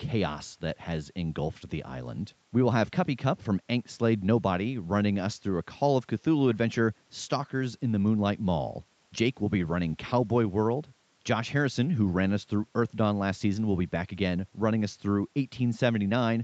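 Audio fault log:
There is no fault in this audio.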